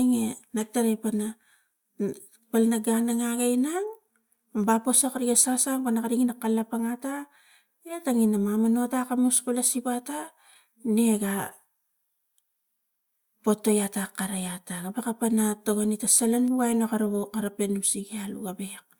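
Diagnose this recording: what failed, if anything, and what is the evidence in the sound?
Nothing failed in this speech recording, and the sound gives no evidence of a fault at any stage.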